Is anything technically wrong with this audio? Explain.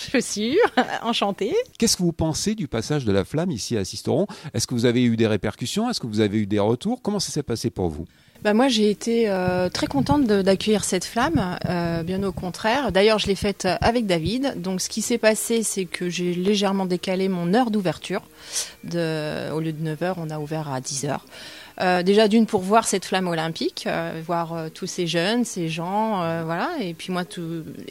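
Yes. Four isolated sharp clicks occur at 4.61, 9.36, 16.48 and 21.96 s. These are most likely dropped samples: a fraction of a millisecond of the stream goes missing, so the waveform jumps abruptly to a later value. Unlike a dropout, no sound is audibly lost. There is only a thin vertical spike across the spectrum.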